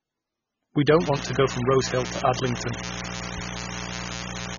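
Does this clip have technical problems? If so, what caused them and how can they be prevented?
Yes. MP3 compression affects the whole clip: the speech has nothing above 6.9 kHz and sounds heavily watery and swirly, with smeared consonant attacks and chirpy s sounds. The likely cause is an MP3 encoder starved of bits, at what sounds like a very low bitrate around 16 kbps. It cut the treble at a fixed point and dropped weak frequency lines that flicker on and off from frame to frame. Encoding at a higher bitrate, or keeping a lossless master, would prevent this.

Mains buzz starts at 0.85 s and continues to the end. It is a steady, raspy buzz built on 60 Hz harmonics, roughly 10 dB below the speech. Sharp switching spikes from a dimmer, rectifier or poorly shielded cable entered the signal twice per mains cycle, and those spikes spread harmonics up into the kilohertz range. Using shielded balanced cables, avoiding dimmers and fixing ground loops would prevent it.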